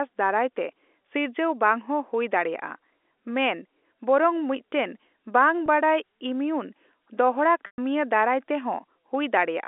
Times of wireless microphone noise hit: none

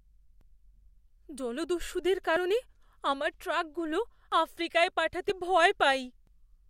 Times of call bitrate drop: none

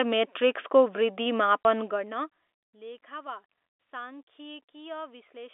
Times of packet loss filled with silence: 1.64

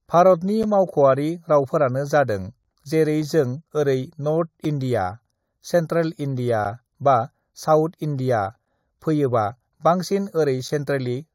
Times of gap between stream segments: 0.63, 4.65

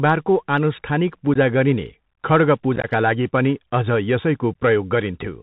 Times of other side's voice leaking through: none

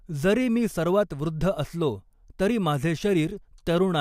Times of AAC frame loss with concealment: none

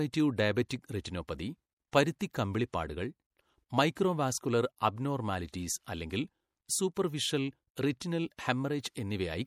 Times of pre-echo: 0.69, 2.33

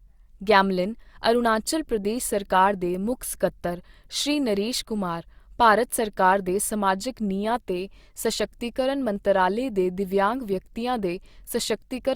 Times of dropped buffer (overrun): 9.16

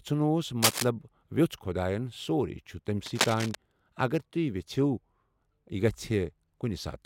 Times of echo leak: none

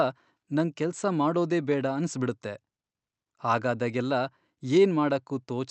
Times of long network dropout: none

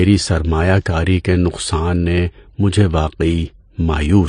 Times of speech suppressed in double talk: none

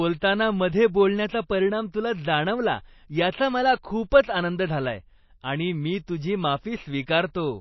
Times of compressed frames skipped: none

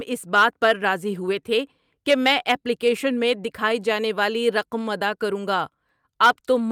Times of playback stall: none

